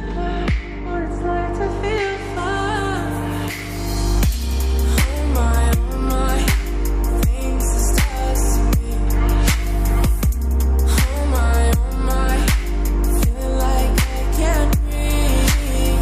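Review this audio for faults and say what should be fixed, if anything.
Nothing to fix: no audible faults anywhere in the recording.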